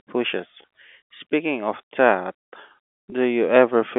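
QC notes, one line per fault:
0.62 s and 3.10–3.12 s: packet loss with pitch repetition. Each gap is about 20 ms, which fits a single lost packet. The receiver filled it by looping the last pitch period of the speech, so instead of a dropout there is a brief held, slightly buzzy tone before normal audio resumes. The gaps are too short for the repeated cycle to fade into silence. The fill sits within the narrow 250 Hz to 3.5 kHz telephone band of the G.711 line.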